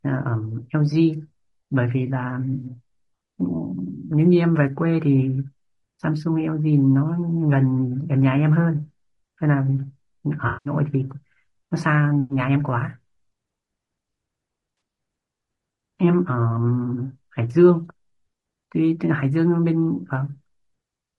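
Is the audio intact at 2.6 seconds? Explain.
No. From 2.53 to 2.66 s there is AAC frame loss with concealment: the decoder rebuilt about 80 ms from the last good spectrum, leaving a smeared, noisy patch. Throughout the clip, the speech sounds rough and grainy, with noise between harmonics and a lowered or synthetic top band, likely from low-delay AAC compression at 32 kbps.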